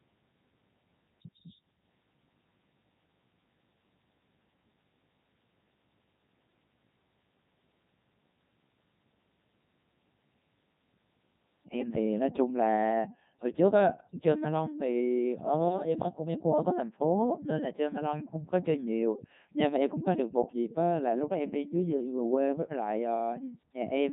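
The speech sounds robotic and buzzy from start to finish, the heavy damage of the Codec 2 vocoder. Rather than keeping the waveform, the decoder rebuilds the voice from sine waves using only pitch, voicing, energy and a spectral envelope, which fits its 3.2 kbit/s mode.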